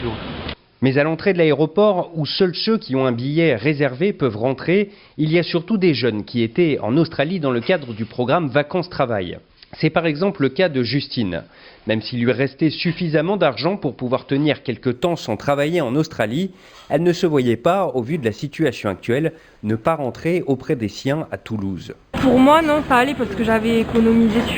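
From 14.94 s to the end at 24.58 s there's imaging from linear upsampling. The top end goes dull, which points to the audio having been at about 11 kHz and brought up to 44.1 kHz by just drawing straight lines between samples. That's a pretty leaky filter, so a mirrored copy of the spectrum sits from 5.51 kHz to 11.03 kHz, roughly 30 dB under the signal. It comes across as a faint metallic shimmer on the brighter parts of the sound.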